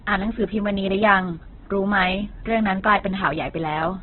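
Throughout, likely heavy Opus compression, fitting a very low rate near 8 kbps, strips everything above 4.2 kHz, leaving the speech muffled, rough and grainy.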